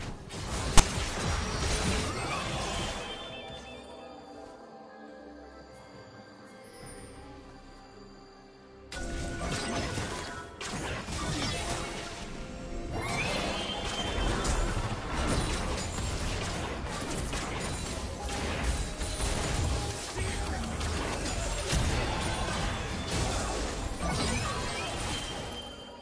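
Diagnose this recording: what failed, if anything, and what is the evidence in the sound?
A storage-stage fault: file tags played as audio at about 0.78 s. A block of text metadata was decoded as samples, giving a brief, loud rasp with hard edges. The waveform shows a short slab offset to one side; the spectrogram shows a sharp, full-band vertical stripe.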